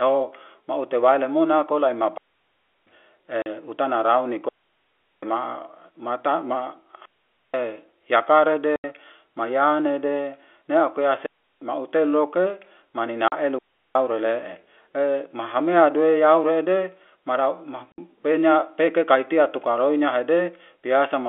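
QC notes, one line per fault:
2.18–2.87, 4.49–5.23, 7.05–7.54, 11.26–11.62 and 13.59–13.95 s, digital wireless dropout: five clean holes of near silence lasting about 0.35 to 0.74 s. The first comes right after "mute waile mona tola" and the second right after "utana rauni". Each one fades out very fast with no noise burst on either side. That's what you get when a digital radio link loses too much data and the receiver just mutes until it locks back on.
3.42–3.46, 8.76–8.84, 13.28–13.32 and 17.92–17.98 s, packet loss filled with silence: four short gaps of 40, 80, 40 and 60 ms. The first one sits just before "utana rauni". The edges are hard against the band-limited phone-line sound. All four lengths are multiples of 20 ms, which fits 20 ms packets going missing and the receiver dropping in silence instead of concealing them. That's why you hear abrupt chops rather than smoothed-over gaps.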